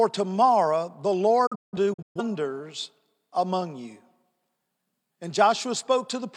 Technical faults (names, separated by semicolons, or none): digital broadcast dropout